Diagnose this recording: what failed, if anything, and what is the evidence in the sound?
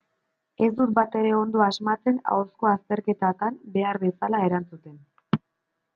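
Nothing failed: no stage from the analogue wiring through to playback leaves an audible mark anywhere in the recording.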